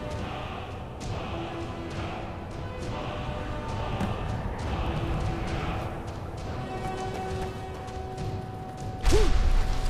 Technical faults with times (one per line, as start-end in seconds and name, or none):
3.02 dropped buffer (overrun)
4.86 dropped buffer (overrun)